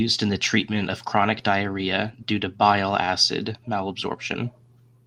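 Listening through this speech recording, nothing stood out as a technical problem.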